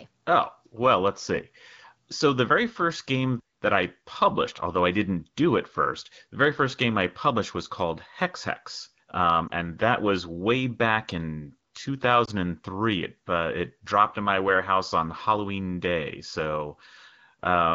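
At 9.48 s and again at 12.25 s, a single lost AMR speech frame (about 20 ms) makes the decoder reuse the previous pitch and vocal tract settings at reduced gain, so each sounds like a brief dip or warble rather than a hard silent gap.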